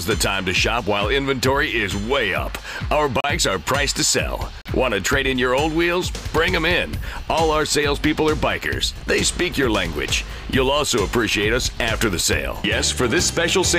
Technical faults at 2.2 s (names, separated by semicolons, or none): none